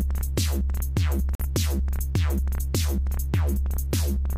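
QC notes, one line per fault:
1.35–1.45 s, corrupt frame muted: the audio cuts abruptly to silence for about 0.10 s, consistent with one damaged compressed frame the decoder rejected and the player replaced with silence. On a waveform there is a flat, near-silent gap with sharp edges, and on a spectrogram a full-band blank column. Timing stays intact.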